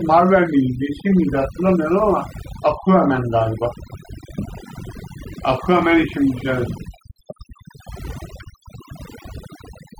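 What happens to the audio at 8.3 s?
Overdone noise removal runs through the whole clip, 8.3 s included: bands near the noise estimate are cut away, so the background drops and breaks up into twinkling specks.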